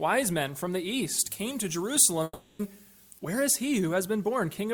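From 1.19 to 3.19 s, pre-emphasis left on: treble boosted by the CD 50/15 µs curve was never cut back, leaving about 8 dB extra at 10 kHz against 1 kHz. The sound turns thin, bright and hissy, unlike a plain EQ tilt, because it follows that fixed shelf.

Within that span, from 2.23 to 2.61 s, the sound is replaced by a fading continuation of what came before, ending in a brief near-silence, then resumes with about 0.36 s gone, likely a long network dropout. A short click or glitch would skip no time like this.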